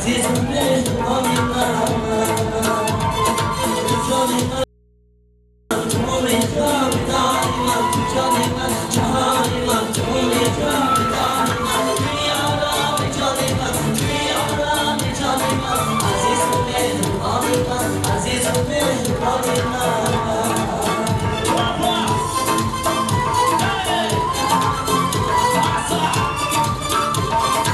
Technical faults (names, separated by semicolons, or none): audio dropout to a faint residue